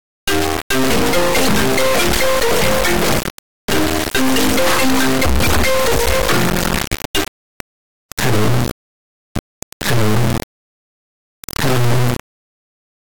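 Integer read as float runs throughout: 32-bit integers decoded as 32-bit floats give a blaring square-wave buzz, with the waveform jumping between zero and clipping and the spectrogram smeared broadband.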